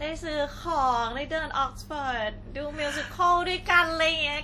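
Across the whole speech clip the sound rings and smears, with a hiss that swells and fades with the signal, likely WMA compression at a rate fitting about 48 kbps. Unlike a hard low-pass, content reaches 19.5 kHz; the damage is washy transform-block noise, not missing treble.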